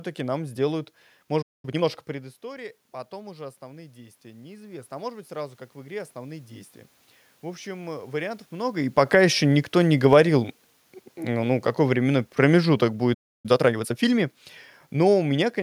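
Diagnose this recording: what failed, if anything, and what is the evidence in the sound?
The speech drops to silence from 1.42 to 1.65 s and again from 13.14 to 13.46 s, about 0.22 s and 0.30 s, then resumes without losing its place. This playback stall is likely a buffer underrun or blocked player thread. Unlike a network dropout, nothing is concealed or skipped.

Right after each gap the player works off its backlog with time-compressed catch-up. From 1.65 to 1.85 s the speech runs at 2x, and from 13.46 to 14.06 s at 1.5x, with pitch unchanged. That steady pitch rules out a resampling or clock error.

From 2.07 to 6.79 s the call processing raises its gain by about 9 dB after the input fell about 18 dB when the talker moved back near 2 s. This automatic gain rising is distinguished from the talker's own movement because room noise swells along with the voice.

Automatic gain falling runs from 11.30 to 14.35 s, with the level sinking about 4 dB in a slow ramp that overlaps the second stall. 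The background drops together with the speech, so this is the gain control acting on the signal, not the talker leaning away from the microphone.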